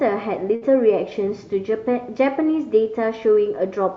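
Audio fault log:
0.55–0.64 s, burst of packet loss: the speech briefly smears into a held, fading buzz or hiss, then resumes slightly further on. About 60 ms of packets never arrived in time, so the receiver stretched and faded the last sound to cover the gap, and that stretch of speech is simply gone.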